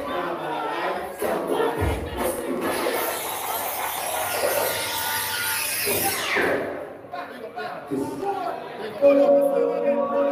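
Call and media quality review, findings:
Processor overload crackle, 2.37–2.78 s and 8.14–8.47 s: audio thread missing deadlines, rapid sub-millisecond silent gaps; gritty tearing, not a single clean dropout like packet loss.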